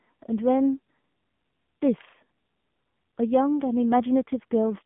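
From start to finish the speech carries the sound of an AMR narrowband mobile codec, heavily damaged. The band is squeezed to roughly 150 Hz to 3.5 kHz, and the buzzy, synthetic texture points to a low-rate mode near 6.7 kbps, where few pulses per frame excite a vocal-tract model. On a spectrogram, energy stops at a flat ceiling around 3.6 kHz with nothing above, and the bottom below 150 Hz is bare.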